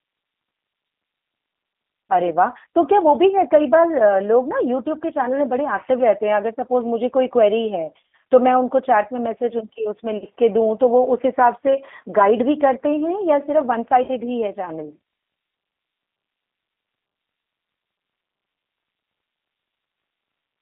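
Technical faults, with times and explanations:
Throughout: G.729 codec. The speech has the rough, slightly synthetic edge of a low-rate speech coder, which fits 8 kbit/s G.729A. The coder rebuilds each short frame from a vocal tract filter, a pitch predictor and a handful of pulses rather than sending the waveform itself. The line band runs only from about 250 Hz to 3.6 kHz, so it sounds thin and boxy, and the coding damage is plainly audible.
10.18 to 10.26 s and 14.04 to 14.10 s: VoIP packet loss concealed by the speech codec. Both times about 40 ms of audio went missing, which fits two lost packets. The decoder filled each gap by repeating its last pitch and filter settings at falling gain, so the speech smears into a brief buzzy tone or coloured noise that fades. Because each frame builds on the one before, the speech stays weak or distorted for a moment after each gap.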